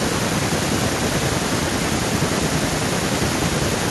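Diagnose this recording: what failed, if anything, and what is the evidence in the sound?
Nothing failed: none of the stages from capture through to playback leaves any audible trace on this speech recording.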